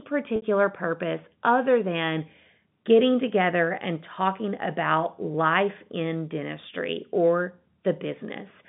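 At 0.36 s, just before "purpose other than getting", there is a packet loss with pitch repetition lasting about 60 ms, to 0.42 s. The receiver bridged the missing audio by replaying the last pitch period and fading it down. The gap length fits three consecutive 20 ms packets going missing. It is heard as a brief held, buzzy tone in place of the speech, before the cross-fade back into the G.711 telephone-band signal.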